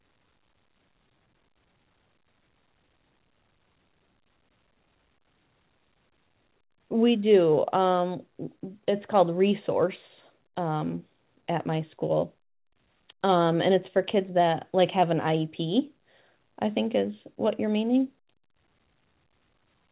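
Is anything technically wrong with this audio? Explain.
No, nothing is technically wrong with this audio.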